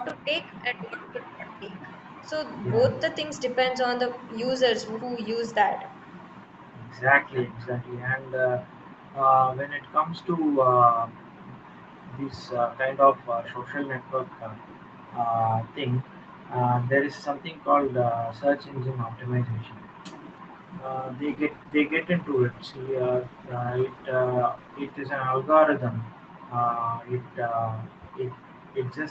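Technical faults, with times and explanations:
0.05–0.12 s and 7.34–7.43 s, echo leak: a faint delayed copy arrives 317 ms later, about 25 dB then about 15 dB below the speech, likely from loudspeaker pickup. It shows as a weak repeated spectrogram pattern.
0.13–1.88 s, speech suppressed in double talk: the speech dips by up to about 35 dB for roughly 1.5 s in total, likely echo-canceller suppression during simultaneous talk. The waveform envelope shows sudden hollow gaps.
21.26–25.01 s, call bitrate drop: Opus falls from 32 to 11 kbps, holding the low rate for 3.69 s. Coarser coding makes the sound rough and watery, with smeared, blotchy spectrogram texture.
27.78–28.01 s, background gated by the echo canceller: the room sound is pulled down by about 40 dB for roughly 200 ms while the loudspeaker plays, leaving a brief near-silent notch in the waveform.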